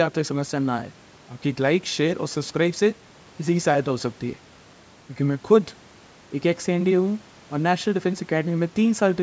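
No faults are audible in this speech; the only processing heard is the call microphone chain, whose high-pass trims the deepest bass and whose band stops at 8 kHz, both normal.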